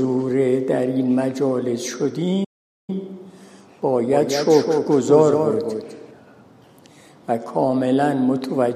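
The audio cuts out at 2.44 s and stays silent until 2.90 s, a gap of about 0.44 s. This is a playback stall. The likely cause is the player running out of data or its thread being blocked before output resumed. From 4.13 s to 6.11 s a second full-band copy of the sound trails the original by roughly 200 ms, about 5 dB quieter. This is a doubled audio track. It has no decay or room colour, and it starts and stops abruptly. The likely cause is a second capture through a slower path, or an edit holding two copies out of step.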